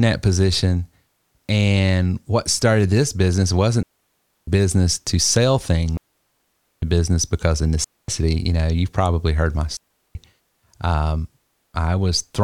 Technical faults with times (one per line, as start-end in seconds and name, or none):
3.83-4.48 digital wireless dropout
5.97-6.82 digital wireless dropout
7.84-8.08 digital wireless dropout
9.77-10.15 digital wireless dropout